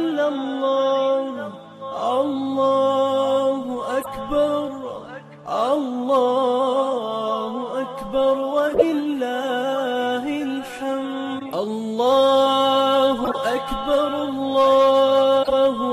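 Corrupt frame decoded at 4.02–4.08, 8.67–8.84, 11.39–11.52, 13.24–13.36 and 15.42–15.53 s. Damaged compressed frames were played anyway, so misread codes scatter energy to wrong frequencies. The result is brief chirps and noise bursts spanning a few frames each, loudest at 8.7 s.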